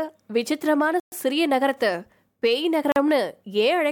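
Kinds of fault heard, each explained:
Block of digital silence: Twice the speech drops straight to silence and comes back with no fade. The first dropout runs from 1.00 to 1.12 s, and at 120 ms it's long enough to hear as a real hole in the speech. The second, from 2.92 to 2.96 s, lasts only 40 ms, so it comes across as a brief gap.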